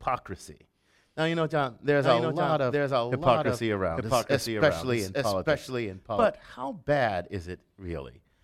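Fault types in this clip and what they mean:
Doubled audio track: from 2.01 to 6.25 s a second, full-band copy of the speech runs about a second behind and roughly 5 dB quieter, likely from a second, slower capture path. Unlike an echo, it has no decay or room colouring and starts and stops abruptly.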